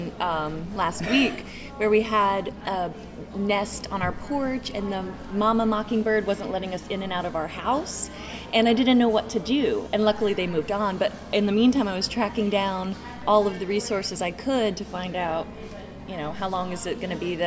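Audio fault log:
Nothing to log here; I didn't catch a single glitch anywhere in this one.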